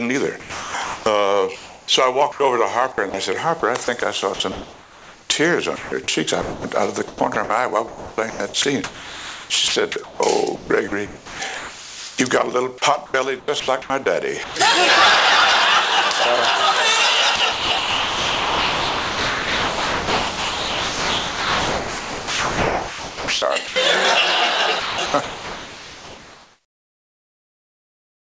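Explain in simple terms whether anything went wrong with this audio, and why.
Sound chopped by the voice detector, in five stretches: 0.4 to 2.4 s, 2.92 to 12.18 s, 12.78 to 14.56 s, 17.36 to 23.76 s, and 24.8 s to the end. The likely cause is a sending side that kept deciding the sound had stopped, pausing transmission and substituting artificial comfort noise. About 1 s, 4.1 s, 0.5 s, 5.9 s and 3.3 s were replaced, so the audio cuts in and out.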